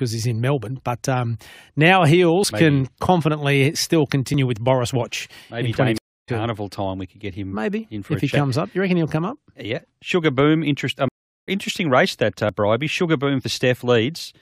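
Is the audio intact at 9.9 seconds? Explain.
Yes, the audio is intact at 9.9 seconds, with no fault audible at that point.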